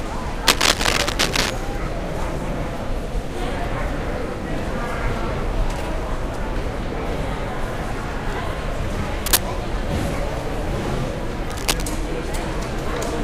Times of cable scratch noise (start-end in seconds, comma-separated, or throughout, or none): 0.47-1.50, 9.26-9.45, 11.49-11.95